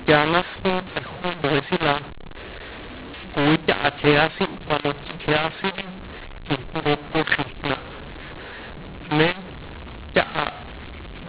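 Mu-law and A-law mixed up, throughout the clip: speech coded with mu-law G.711 is decoded as A-law, so sample levels are scrambled and quiet samples jump above silence. The speech sounds harsh and distorted, and pauses fill with noise, all within the 4 kHz telephone band.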